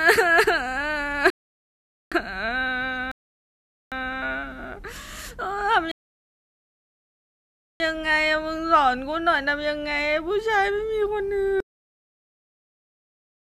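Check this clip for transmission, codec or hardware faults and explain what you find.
Two faults: three rebuffering stalls and a cut-off end. At 1.30–2.12 s, 3.12–3.92 s and 5.92–7.80 s, rebuffering stalls appear. Playback ran dry and paused, adding 0.81 s, 0.80 s and 1.89 s of flat-line silence. The speech then resumes exactly where it stopped, with nothing missing. At 11.60 s, the cut-off end: the final buffers never played, so the speech halts mid-sound. The waveform drops straight to digital silence with no decay tail.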